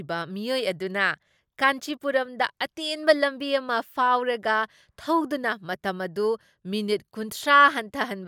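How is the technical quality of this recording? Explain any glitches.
The recording's technical quality is sound, with no glitches to explain.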